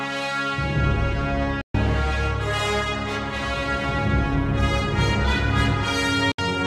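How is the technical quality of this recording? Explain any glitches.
Two digital broadcast dropouts interrupt the recording. At 1.61 to 1.75 s the sound fades out over about 3 ms and goes silent for about 128 ms. At 6.32 to 6.45 s roughly 64 ms is lost in a single hole within that span. Each time, the receiver muted on failed frames and resumed with later material, so what was sent during the gaps is missing. On a waveform these show as flat gaps with brief tapered edges; a spectrogram shows blank full-band vertical strips.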